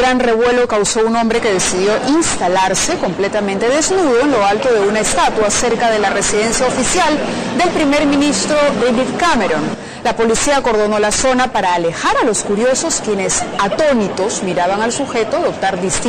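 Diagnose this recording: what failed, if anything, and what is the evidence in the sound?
Nothing failed: no stage of the chain, from analogue wiring through conversion, buffering, processing, network and storage to playback, leaves a mark anywhere in this recording.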